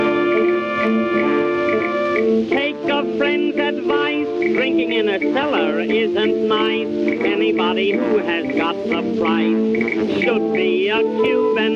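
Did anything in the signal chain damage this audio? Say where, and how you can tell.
Yes. Gain pumping runs through the whole clip: the gain is pulled down by around 10 dB each time a loud sound arrives, and loud and soft passages sit unnaturally close in level, leaving the sound squashed. The likely cause is input gain set far too high at the microphone stage, with a fast limiter or compressor further along clamping down on each peak and releasing quickly in the pauses.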